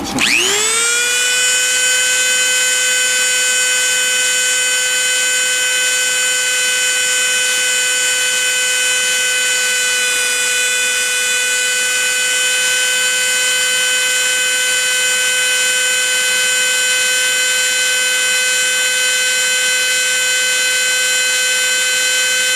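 No technical faults can be heard anywhere in the recording; the signal stays steady and intact throughout.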